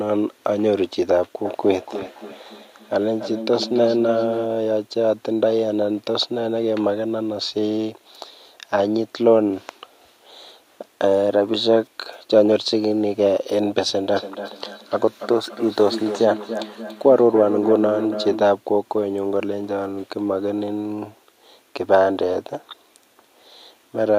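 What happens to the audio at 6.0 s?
Nothing goes wrong at 6.0 s: the speech there plays through intact, with no dropout, click, distortion or other technical fault.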